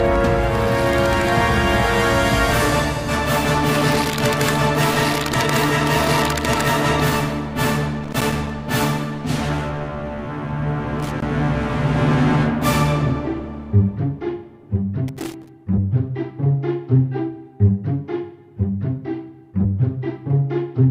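Irregular bursts of crackle and scratching break into the audio three times: from 8.03 to 8.50 s, from 11.00 to 11.22 s, and from 15.08 to 15.49 s. Each burst lasts under half a second and sounds chopped and gritty rather than steady. This is loose connector crackle: a worn or dirty contact in the signal path making and breaking rapidly as it shifts, so the signal cuts in and out and any DC on the line turns into pops.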